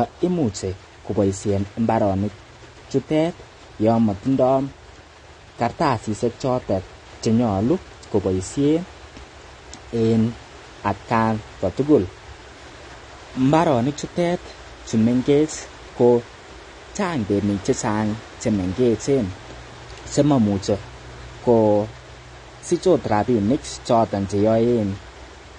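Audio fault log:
throughout, AAC compression: the speech has likely been through AAC-LC encoding at a low bitrate, around 32 kbps judging by the damage. With too few bits to describe every frame, the encoder drops the top of the spectrum entirely, so nothing sounds above 9.6 kHz and the speech comes across dull and closed-in. The remaining bands are quantised coarsely, leaving plainly audible smearing and a warbling, fizzy texture on sustained sounds and sibilants.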